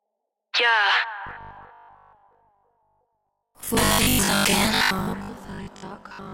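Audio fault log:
1.27 to 6.33 s, robotic sound from repeated short buffers: new audio likely arrives too seldom, so the last short chunk, which fits a 20 ms buffer, is replayed while roughly half the real material is skipped. This imposes a rigid, metallic 50 Hz buzz.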